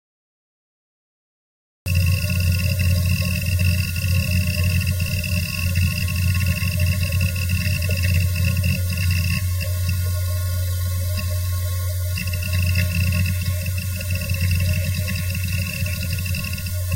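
An everyday sound recording with a cut-off start. The clip holds digital silence until 1.86 s. Then the sound enters abruptly, already in progress, with no attack or fade-in. Capture or streaming began late and missed the opening of the event.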